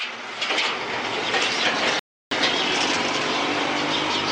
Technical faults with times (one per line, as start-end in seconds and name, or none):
1.99-2.31 rebuffering stall